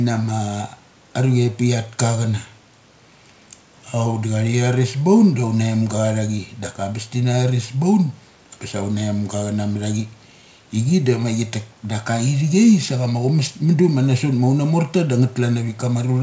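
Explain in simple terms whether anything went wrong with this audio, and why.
Nothing went wrong with this audio; the faint background noise is just the room where it was recorded, not a fault.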